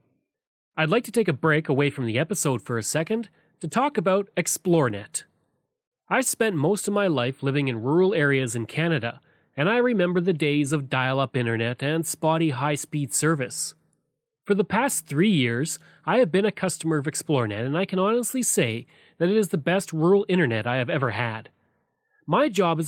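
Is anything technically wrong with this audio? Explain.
No, nothing technically wrong is audible anywhere in this speech recording.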